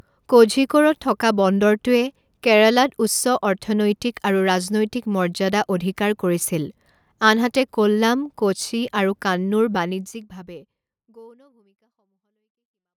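Nothing stood out on listening to this speech, and the smooth fade-out over roughly the final three seconds sounds like an ordinary editorial fade.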